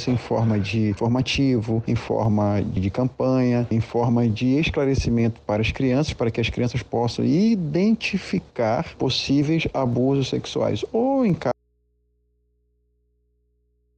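At 11.5 s the sound drops out abruptly to a faint residue of hum, roughly 45 dB down, to the end, likely from the source disconnecting while the input stayed live.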